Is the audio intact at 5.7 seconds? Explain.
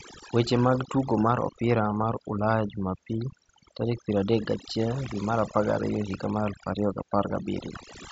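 No, overdone noise removal runs through the whole clip, including 5.7 seconds. The noise reduction clamps any frequency band near its noise estimate, taking soft parts of the speech with it, so the background drops and breaks up into twinkling specks.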